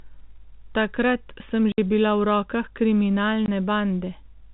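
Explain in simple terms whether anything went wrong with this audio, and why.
Two short gaps of dead silence cut into the speech, at 1.72 to 1.78 s and 3.46 to 3.48 s. That's packet loss filled with silence: chunks of audio never arrived, so the gaps were left empty. The lengths, 60 ms and 20 ms, fit three packets and then one.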